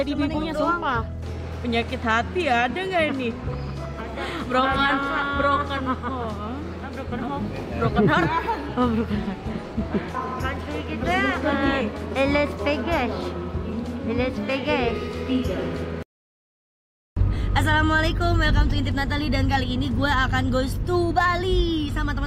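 No technical faults can be heard anywhere in this recording. Nothing in the audio breaks, drops out or shifts at any point.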